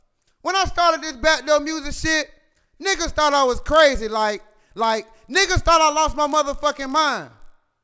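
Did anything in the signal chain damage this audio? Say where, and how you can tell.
Yes. The damage sits at the sample-rate conversion stage. From 3.22 s to the end of the clip, a steady buzz at 50 Hz rides on the sound and follows the signal level. That rate matches ticks every 20 ms, so each 20 ms block was resampled on its own. This is a resampler restarted on every block. The converter never saw neighbouring samples at block edges, so every edge carries a small error. The sound points to a 48 kHz to 16 kHz conversion.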